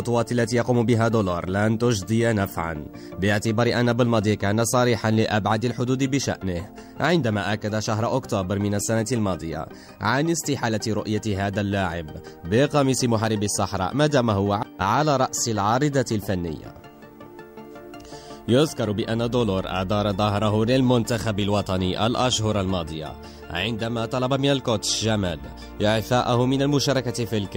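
From start to finish, a low buzz sits under the sound at 50 Hz with a gritty hash above it, and a faint, very high whine rides at 15.6 kHz, all roughly 40 dB below the programme. This is video or display buzz: a screen or video cable is leaking into the audio path, so the picture's 50 Hz field rate comes through as the buzz and its line scanning as the high tone.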